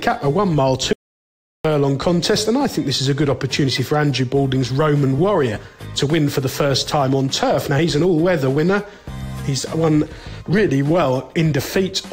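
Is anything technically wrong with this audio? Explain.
Yes, there are two problems.

From 0.93 to 1.65 s there's an audio dropout to silence: about 0.72 s of dead silence, no room tone at all, with the sound chopping off and then resuming mid-flow. That's most likely the input going away briefly while the recording kept writing empty samples.

Then there are compressed frames skipped, at 3.67 s and again at 5.55 to 5.57 s. The audio jumps forward, losing roughly 20 ms the first time and around 50 ms the second, which fits one and then about two frames of a 23.2 ms frame length.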